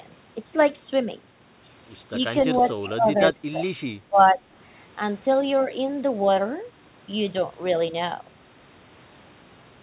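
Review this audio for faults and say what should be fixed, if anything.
An echo leak occurs from 2.56 to 2.64 s. The echo canceller at the loudspeaker end likely failed to fully cancel what its microphone picked up from the speaker, so a brief fragment went back down the line. It is heard as a faint copy of the speech trailing 462 ms behind the original, sitting about 15 dB below it. To prevent this, lengthen the canceller's filter so it covers echo delays near half a second and re-tune its residual suppression.

Speech suppressed in double talk occurs from 2.57 to 3.67 s and again from 4.08 to 4.40 s. While both sides were talking, the echo canceller likely could not separate the local talker from the returning echo and attenuated everything together. The speech dips by roughly 15 dB at its deepest, for about a second in the first stretch and about a third of a second in the second. A better double-talk detector that holds suppression back while the near-end talker is active would prevent it. 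The G.711 call path limits the band to 4 kHz as designed.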